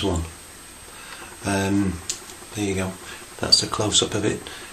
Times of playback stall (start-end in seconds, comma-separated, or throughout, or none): none